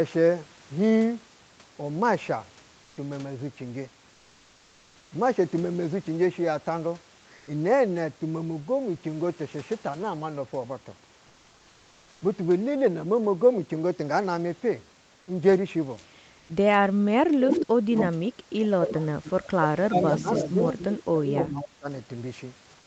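At 7.37 to 7.47 s, 11.27 to 12.21 s and 16.39 to 16.49 s, comfort noise replaces the background. The room's detail gives way to flat, featureless hiss, about 2 dB quieter in the longest gap. Opus discontinuous transmission is the likely cause.

From 17.02 to 19.31 s, speech is suppressed in double talk. The voice drops by roughly 40 dB at worst. The echo canceller likely mistook it for echo while both sides spoke. It returns at 19.86 to 20.65 s, dipping about 10 dB, and at 21.10 to 21.88 s, dipping about 40 dB again.

Echo leak overlaps these stretches. A copy of the voice returns 280 ms late at 17.49 to 17.61 s, nearly as loud as the speech. It recurs at 17.98 to 18.06 s, 19.28 to 19.50 s, 20.02 to 21.04 s and 21.38 to 21.62 s, about 5 to 20 dB down. A loudspeaker's sound likely slipped past the canceller.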